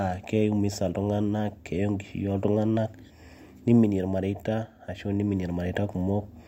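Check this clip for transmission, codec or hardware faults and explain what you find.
Nothing in this speech recording points to a fault in the chain that captured, encoded or carried it. There is no event here to place in time or trace to a cause.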